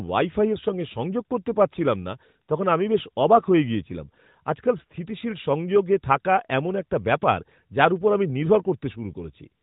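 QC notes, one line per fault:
No faults found in this speech clip. The AMR narrowband mobile codec path cuts everything above 4 kHz and leaves only light coding texture, which fits its top 12.2 kbps mode.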